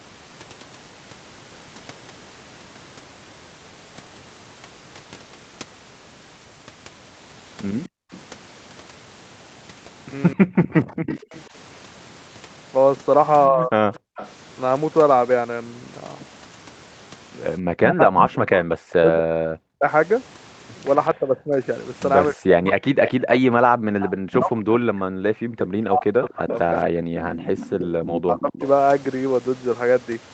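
From 7.85 to 14.32 s, and again from 23.06 to 28.6 s, a faint delayed copy of the far talker trails the speech by 246 ms, sitting around 15 dB below it. This is an echo leak, likely from a loudspeaker whose echo canceller let some of the microphone pickup through and back down the line.

At 7.89 to 8.11 s, the room sound suddenly drops by about 40 dB for roughly a fifth of a second and then returns. The same dip comes at 14.0 to 14.16 s and 27.03 to 27.17 s. This is background gated by the echo canceller, which clamped the microphone hard while the loudspeaker played.

Between 10.34 and 13.72 s, the near talker dips and breaks up in pieces, deeply, by up to 30 dB, for just under half a second in total. From 17.82 to 28.66 s this happens much more, with drops up to around 40 dB over some seven seconds. The likely cause is speech suppressed in double talk. With both sides speaking, the canceller could not tell voice from echo and turned both down.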